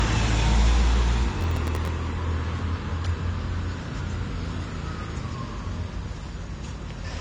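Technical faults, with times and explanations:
Throughout: AAC compression. Nothing is present above 9.9 kHz, and the sound is dull with plainly audible coding damage. This likely points to low-bitrate AAC-LC of around 32 kbps. Unlike a clean low-pass filter, the lost detail comes with smeared, artefact-laden texture.
1.41 to 1.88 s: processor overload crackle. For about half a second, some twenty very short buffers of roughly 1.5 ms each miss their deadline and replay stale audio with hard edges. The result is a gritty tearing that stops when the load passes, not a single click or dropout.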